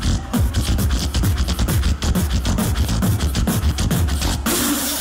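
From 0.75 s to 4.51 s, a short click recurs every 1.25 s, about four in all. These are clock drift buffer slips. Two independent clocks likely disagree by several hundred parts per million, so a few dozen samples are periodically dropped or repeated.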